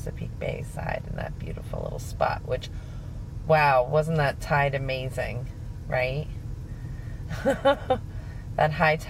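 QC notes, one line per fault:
No technical faults can be heard anywhere in the signal.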